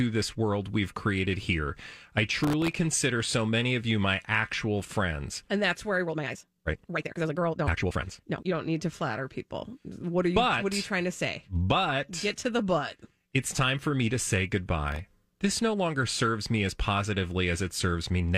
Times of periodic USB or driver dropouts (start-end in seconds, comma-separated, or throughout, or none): none